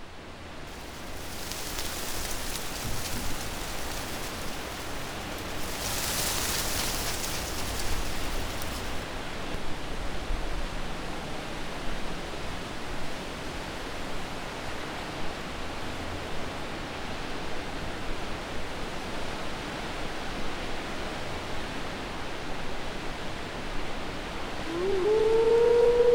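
Damaged data in a compressed stream is what's going on here: the audio hits three short glitches, a brief burst from 4.46 to 4.53 s and then single blips at about 9.55 s and 18.83 s. At those points part of the encoded stream got corrupted, so the decoder couldn't make sense of those frames, lost its sync and had to hunt for the next good frame header.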